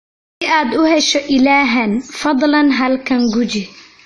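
The clip opens on digital silence. For the first 0.42 s there is nothing at all. Then the sound cuts in abruptly at 0.42 s, already in the middle of speech, just before "aad u hesho ilahan". This is a cut-off start. Capture or streaming began late, so the opening of the utterance is simply missing. There is no natural attack and no fade-in. The speech switches on abruptly, as if a gate had opened.

Throughout the clip, the speech sounds dull and smeared. Nothing is present above 11.5 kHz, so the top of the spectrum is flat and airless. The codec damage is plainly audible. Sibilants turn fizzy, and sustained sounds warble. The likely cause is AAC compression, specifically AAC-LC at a low bitrate, which fits about 32 kbps. At that rate the encoder lowers its cut-off and starves the upper bands of detail.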